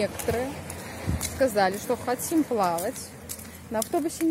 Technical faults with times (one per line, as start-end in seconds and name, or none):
none